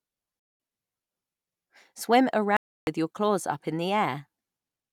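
A Bluetooth dropout, most likely, cuts the speech twice: from 0.40 to 0.60 s, a gap of about 0.2 s, and from 2.57 to 2.87 s, a longer gap of about 0.3 s. Each time, audio packets failed to reach the headphones in time and were discarded, so the output drops to silence. The speech then resumes further along, as though it had carried on playing through the hole.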